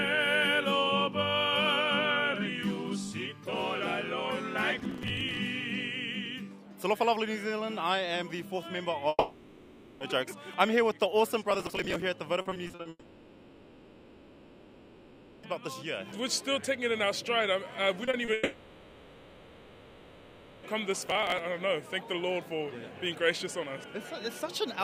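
From 4.79 to 5.37 s there's a burst of processor overload crackle: the machine kept missing its deadlines on what sounds like roughly 5 ms buffers, skipping each one, so dozens of tiny hard-edged gaps pile up into gritty tearing. The same crackle returns at 11.51–12.02 s and 21.06–21.39 s.

At 9.09–10.03 s the sound turns into a fading buzz for about 0.9 s, drops into a brief silence, then picks up further on with that stretch gone. That's most likely a long network dropout with the receiver stretching out the last sound.

Right after, at 12.41–12.87 s, repeated packet loss makes things choppy and robotic. There are seven holes, the longest 40 ms, and patching covers about 43% of that span. It runs straight into what is likely a second long network dropout from 12.89 to 15.45 s, roughly 2.5 s of fading fill and a brief silence before the audio resumes.

Short concealed packet loss hits at 18.05, 18.11 and 18.25 s, 20 ms each, as quick smears where the last sound was continued and blended back. 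Then from 18.33 to 20.65 s a likely third long network dropout fills about 2.3 s with fading continuation, this time with no silent stretch before the audio comes back.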